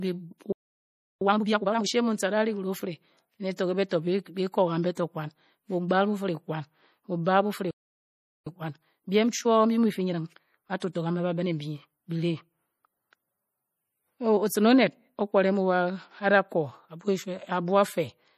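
Throughout, the speech carries plainly audible MP3 compression. Nothing is heard above 15 kHz. The watery, swirly texture fits a low bitrate of around 40 kbps. At that rate the encoder likely ran short of bits. It then zeroed weak frequency lines, and they flicker on and off from frame to frame. The treble is also cut at a fixed point. Sibilants take on a metallic chirp, and attacks lose their edge.

At 0.52 s the speech halts in mid-flow. The gap lasts about 0.69 s, until 1.21 s. This is a playback stall. The player likely ran out of data, or its thread was blocked, so output fell silent until it recovered.

From 1.21 s to 1.89 s the speech is time-compressed catch-up at 2.0 times speed. The player shortens its backlog by cutting out small pieces and cross-fading across the joins. The result sounds rushed, but the pitch stays normal.

Pre-echo begins at 3.56 s, 3.89 s and 4.95 s. Each spreads over about 21 to 22 ms. 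A short hiss runs just ahead of a sharp onset, and the attack sounds softened. The codec spreads its quantisation noise across a whole block. When an attack falls late in that block, noise sized for the loud part leaks into the quiet moment before it.

A second playback stall runs from 7.71 s to 8.47 s, about 0.76 s of silence. It likely has the same starved-buffer cause as the first.

Catch-up follows from 8.47 s to 11.47 s at 1.15 times speed. It is a milder hurry than the first, stretched over a longer span.

Inside that stretch, a fourth pre-echo begins at 10.80 s and spreads over about 20 ms.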